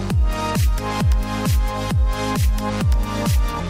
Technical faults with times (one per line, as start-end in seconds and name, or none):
none